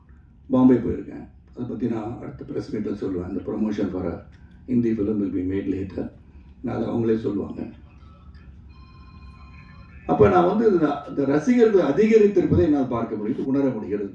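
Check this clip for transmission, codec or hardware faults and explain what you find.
No transmission, codec or hardware faults can be heard anywhere in the clip; the signal stays continuous and steady throughout.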